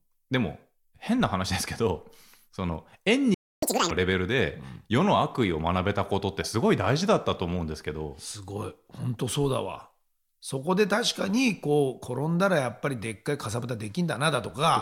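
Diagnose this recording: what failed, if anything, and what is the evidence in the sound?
At the playback stage, a playback stall cuts the speech off mid-flow at 3.34 s and leaves silence until 3.63 s, about 0.28 s. On a waveform this is a flat line with abrupt edges on both sides. On a spectrogram it is a clean vertical blank band across all frequencies. The likely cause is the player's buffer running dry or its audio thread being blocked, so no samples reached the output.

Once output resumes, there is catch-up at higher speed from 3.63 to 3.91 s. The speech runs at twice normal speed and its pitch jumps by around ten semitones, so it sounds chipmunk-like before snapping back. On a spectrogram, harmonics and formants shift sharply upward and the syllable spacing compresses, then both return to normal at 3.91 s. The player is resampling its backlog to recover some of the time lost in the stall.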